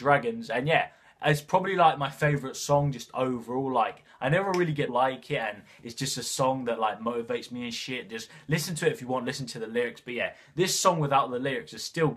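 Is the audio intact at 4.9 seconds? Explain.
No. At 4.88 s there is a brief burst of damaged data in a compressed stream, lasting under 20 ms. Part of the encoded data at that point is wrong. The decoder cannot read those frames properly. It loses its place and has to find the next valid frame header before normal playback resumes. The result is a short, unnatural blip or chirp that cuts across the surrounding sound.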